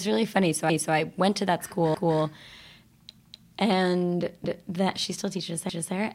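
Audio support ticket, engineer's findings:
Overlapping chunks, 1.94 s and 4.44 s: 250 ms replayed after "i went to that" and before "that she still teaches". Chunk boundaries start early, re-sending overlapped audio.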